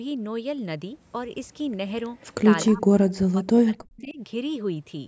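At 2.2 to 2.27 s a faint, delayed copy of the speech appears, an echo leak, most likely from a loudspeaker-fed echo canceller letting some far-end pickup through. It trails the original by 247 ms and sits about 35 dB below it, so it is a brief ghostly scrap. On a spectrogram it shows as a weak replica of earlier harmonic bands shifted a quarter-second later. In the waveform it is a low-amplitude ripple.

From 2.65 to 3.0 s, and again from 3.27 to 4.19 s, the speech dips and breaks up. This is speech suppressed in double talk, likely because the echo canceller could not tell the near talker from the loudspeaker echo and attenuated both. The deepest drops reach around 40 dB, leaving sound that is gapped and dulled over roughly 1.3 seconds in total. The waveform envelope collapses in chunks. On the spectrogram the upper bands, which already end at 8 kHz as expected for call audio, fade.

Inside the second dip, at 3.97 to 4.14 s, the echo leak returns at the same 247 ms delay and about 30 dB down. 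It is slightly stronger this time and shows against the suppressed background as a faint duplicated trace.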